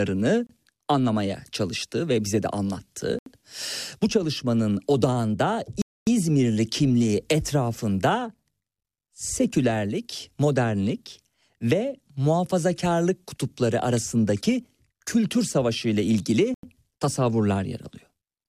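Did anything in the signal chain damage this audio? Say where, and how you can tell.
Yes. Speech cuts to silence four times: 0.47–0.49 s before "anlamaya çalıştı ve bize", 3.19–3.26 s, 5.82–6.07 s after "çalışmanın odağında", and 16.54–16.63 s after "arasındaki kültür savaşı ile". Gaps last 28 to 253 ms. This is likely a Bluetooth stall at playback. Delayed packets drained the headphone buffer until resent data arrived.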